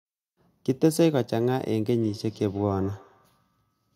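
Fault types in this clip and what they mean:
Feedback echo between two devices: from 2.01 s to 3.8 s the speech returns roughly every 150 ms, about 23 dB below it, because a second device in the room replays the call and this microphone recaptures it. A spectrogram shows faint, evenly spaced copies of each syllable.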